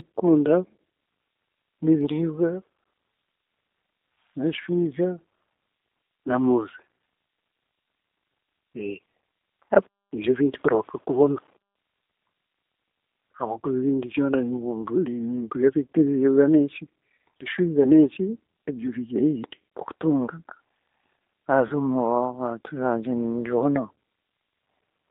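From start to finish the speech sounds thin, slightly rough and synthetic, confined to a narrow telephone band from about 300 Hz to 3.7 kHz with nothing above it. That is the G.729 codec, here the G.729A variant, with damage that is plainly audible. The sound points to a low rate of about 8 kbit/s. Each 10 ms frame is rebuilt from a vocal tract filter, a pitch predictor and a handful of pulses rather than the original waveform, which gives the roughness.

At 21.67 s the speech briefly smears into a stretched sound that fades and stays weak until about 21.73 s. This is VoIP packet loss concealed by the speech codec. About 30 ms of audio went missing, which fits three lost 10 ms frames. The decoder filled the gap by repeating its last pitch and filter settings at falling gain. Because each frame builds on the one before, the distortion outlasts the gap itself.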